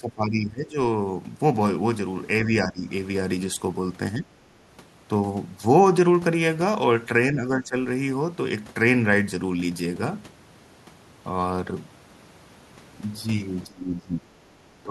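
Speech suppressed in double talk dips the speech at 0.0–0.76 s, 2.64–2.87 s, 4.19–4.29 s, 7.33–7.75 s, 13.67–14.33 s, 14.56–14.61 s and 14.8 s to the end, by roughly 10 to 20 dB at worst. The likely cause is an echo canceller that, with both ends talking, couldn't tell this talker from loudspeaker echo and pulled both down. Unlike packet-loss dropouts, the speech sinks, thins or cuts out in pieces.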